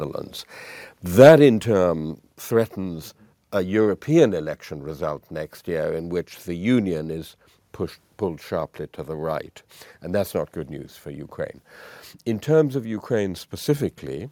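Microphone overload, 1.19 to 1.32 s: peaks push about 4 dB past the converter's limit, likely from excessive input gain, so their flattened tops crackle harshly.

Microphone volume stepped down at 1.29 and 2.28 s: the level, background included, drops abruptly by about 3 dB, then about 2 dB, likely the call software cutting input gain after the clipping.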